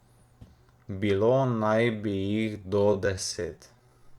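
At 1.19 s the speech suddenly slows down and stays slow until the end. It is a time-stretched section, running at about 0.68 times the original pace. The pitch does not drop. Software likely lengthened the audio by repeating short slices of the waveform to fill more time. Syllables drag.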